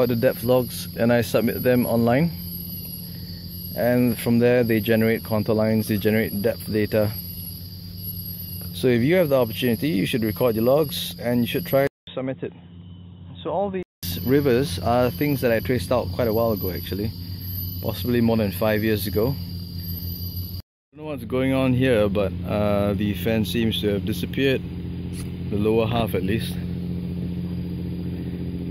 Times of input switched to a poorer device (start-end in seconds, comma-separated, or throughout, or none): 11.87-14.03